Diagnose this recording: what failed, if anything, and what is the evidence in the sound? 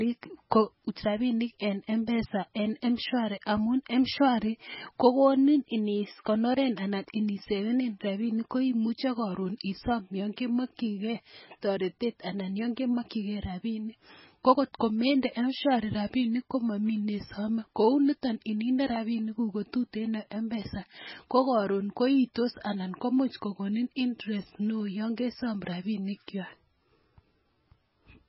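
The codec stage failed throughout this speech. Nothing is present above 5.6 kHz, and the heavy watery, swirling texture comes from weak frequency lines switching on and off between frames. This is likely MP3 compression at a very low bitrate, around 16 kbps. A plain low-pass filter would not swirl.

Pre-echo, also from the codec stage, appears at 22.34 s: a brief hiss of about 18 ms precedes a sharp attack, which sounds softened. The encoder spread that block's quantisation noise back into the quiet moment before the onset. Unlike a click or a dropout, this is a smeared noise leading into the attack.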